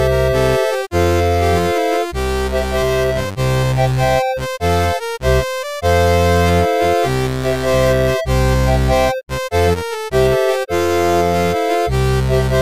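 No faults are audible anywhere in this clip.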